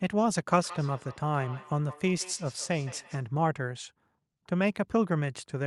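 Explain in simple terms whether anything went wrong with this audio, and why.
From 0.64 to 3.27 s there's feedback echo between two devices: a second device replays the sound, the first mic catches it, and it returns faintly about every sixth of a second.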